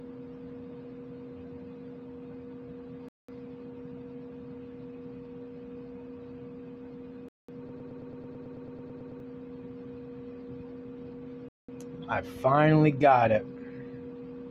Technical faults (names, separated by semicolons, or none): gap between chunks; broken-record loop